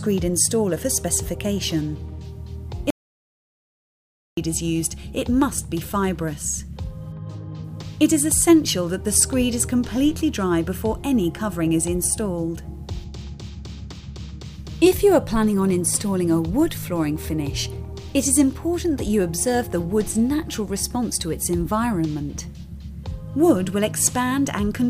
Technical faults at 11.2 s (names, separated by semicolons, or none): none